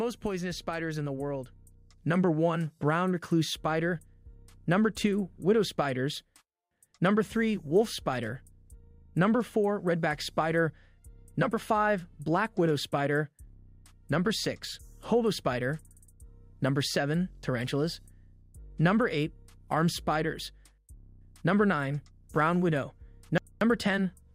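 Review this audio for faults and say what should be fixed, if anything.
No technical faults can be heard anywhere in this audio. Nothing needs to be fixed.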